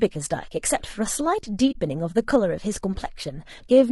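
Low-delay AAC compression, heard throughout the speech, is the likely cause of plainly audible codec damage. The short-frame coding resolves pitch harmonics poorly at the rate this sounds like, around 32 kbps, so the voice turns rough and grainy, with noise between harmonics.

AAC frame loss with muting occurs from 1.71 to 1.76 s. About 40 ms of signal, which fits two lost frames, was zeroed by the decoder. The overlapping windows fade the sound out and back in, leaving a soft-edged gap.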